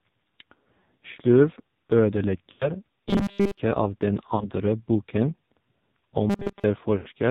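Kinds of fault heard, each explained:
AMR narrowband mobile codec: Heavy low-bitrate mobile speech coding, around 5.9 kbps, leaves the speech buzzy and synthetic with nothing above 4 kHz. A spectrogram shows a sharp ceiling at 4 kHz with empty space above it and smeared, blocky formant bands beneath.
Lost AMR speech frames: Around 2.52 to 2.73 s, 4.36 to 4.50 s and 6.98 to 7.09 s, speech stretches briefly and fades as the decoder reuses old settings, covering about 80, 40 and 80 ms. On the waveform, amplitude decays toward silence, then returns weakly.
Robotic sound from repeated short buffers: From 3.08 to 3.60 s and 6.30 to 6.64 s the speech becomes a rigid metallic buzz at 200 Hz, likely from a 5 ms stretch of audio being repeated while most new audio is skipped. A spectrogram shows flat, evenly spaced 200 Hz harmonics.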